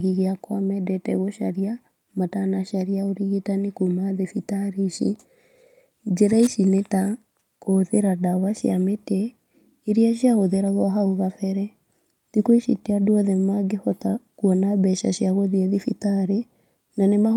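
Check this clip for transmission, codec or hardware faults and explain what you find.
I found no faults to explain in this clip.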